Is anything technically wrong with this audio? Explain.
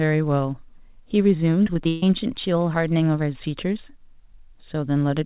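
Yes, there's a burst of repeated packet loss (robotic sound) in this speech from about 1.64 to 2.03 s. Six gaps land in that stretch, the longest 140 ms, and roughly half of it is concealment rather than real audio. Each dropout gets papered over by stretching the last bit of sound, then the next hole hits almost immediately, so you get a choppy stutter with chunks missing. The band stops at 4 kHz, which fits a G.711 call path.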